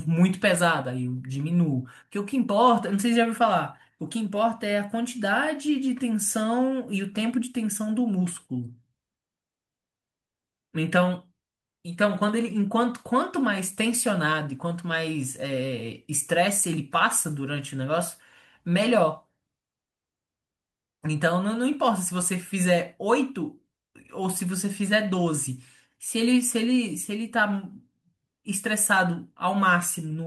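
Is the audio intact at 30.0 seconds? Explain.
Yes, the speech at 30.0 seconds is intact, with no audible fault at that moment.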